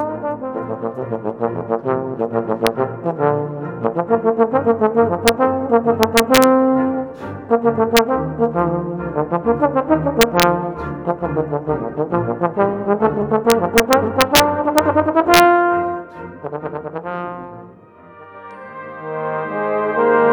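Integer overflow is heard at 2.67, 5.28, 6.03 to 6.44, 7.97, 10.21 to 10.43, 13.50 to 14.40, 14.78 and 15.34 to 15.40 s. Loud peaks pushed the signal about 0 to 2 dB past the largest integer value. Instead of being limited, those samples wrapped around to the opposite sign, leaping across the full range. Each overshoot therefore comes through as a sharp crack on the peaks of the sound, more abrupt than clipping would produce.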